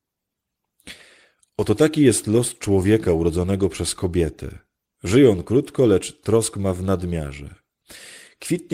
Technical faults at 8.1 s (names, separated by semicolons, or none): none